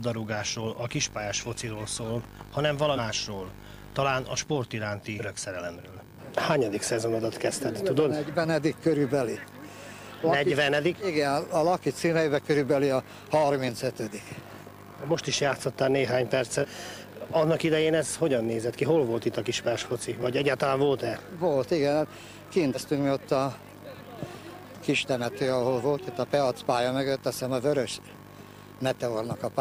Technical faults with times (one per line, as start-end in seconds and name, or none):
2.95-2.99 compressed frames skipped
5.18-5.22 compressed frames skipped
16.60-16.65 compressed frames skipped
22.73-22.78 compressed frames skipped